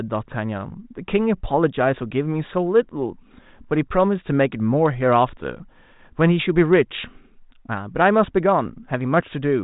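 No technical fault can be heard in this speech recording. It has passed through G.726 ADPCM telephone coding, with nothing above 3.8 kHz and at most a faint trace of coding noise, which fits the 40 kbit/s rate.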